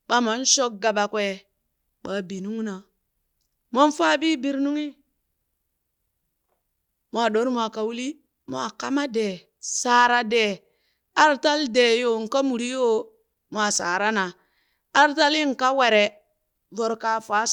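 No technical faults can be heard anywhere in this speech recording.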